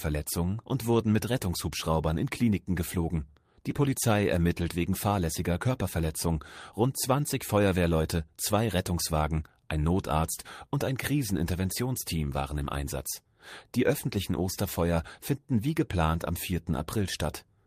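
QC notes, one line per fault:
No faults heard anywhere in the audio.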